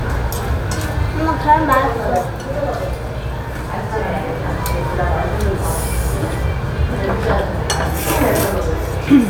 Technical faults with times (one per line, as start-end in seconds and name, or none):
none